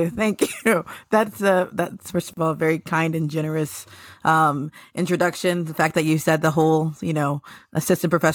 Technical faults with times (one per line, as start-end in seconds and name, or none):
2.33-2.37 gap at a join of encoded pieces